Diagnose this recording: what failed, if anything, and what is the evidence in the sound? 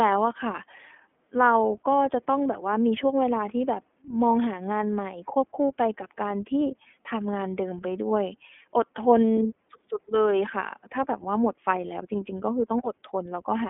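The codec stage is the culprit here: it's iLBC coding all the way through the speech. Nothing survives above about 3.7 kHz, and the plainly audible rough, synthetic texture fits iLBC coding each 30 ms frame's excitation on its own, likely at 13.33 kbps.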